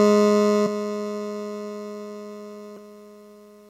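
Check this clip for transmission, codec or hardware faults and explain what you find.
Two brief faults interrupt the music. Both are damaged data in a compressed stream, at 0.65 to 0.67 s and again at 2.77 s. Corrupted frames throw the decoder out of sync, so each spot becomes a short chirp or blip.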